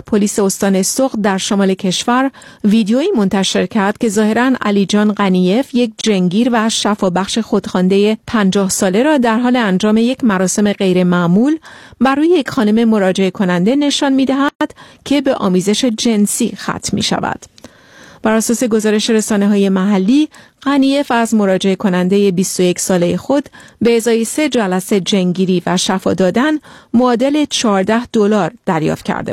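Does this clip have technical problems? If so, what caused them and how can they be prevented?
Yes, there are two faults in this speech clip.

A block of digital silence runs from 6.01 to 6.04 s, about 27 ms long. Samples there were replaced by zeros, as happens when the output buffer isn't filled in time. The sound drops straight to nothing and back. A waveform shows a dead-flat line with hard edges. A spectrogram shows a thin empty column between two broadband vertical streaks. To prevent it, use larger buffers and give the audio thread real-time priority so every block is delivered on time.

A gap at a join of encoded pieces opens from 14.49 to 14.61 s, about 122 ms. Separately encoded segments were joined untrimmed, leaving the encoder's start delay and last-frame padding in place. The sound then resumes where it left off. The waveform shows a flat stretch whose edges are slightly smeared rather than razor-sharp, and the spectrogram shows a clean blank band. 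To prevent it, encode the material in one pass, or trim encoder delay and padding using gapless metadata before joining.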